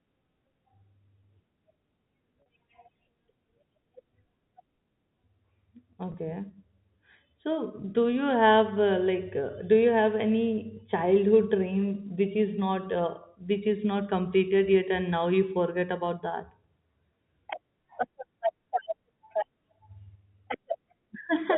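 A brief held, buzzy tone bridges gaps at 2.42 to 2.46 s and 6.12 to 6.14 s over the telephone-band (G.711) audio. This is packet loss with pitch repetition: the receiver repeated the last pitch period to cover roughly 40 ms and 20 ms of missing audio, which fits two 20 ms packets and one.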